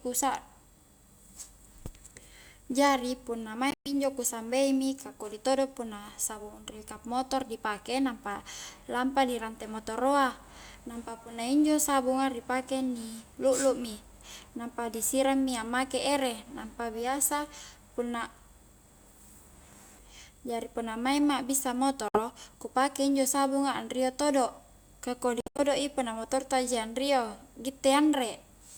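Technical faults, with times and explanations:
3.71 to 3.91 s, 22.08 to 22.20 s and 25.41 to 25.62 s: Bluetooth dropouts, likely from audio packets reaching the headphones too late and being discarded. The speech cuts to silence and resumes further on, as though it kept playing. About 137 ms is lost in the first and 152 ms in the third, both in broken runs. The second is a single 61 ms gap. Waveform and spectrogram show blank vertical slots with sharp edges.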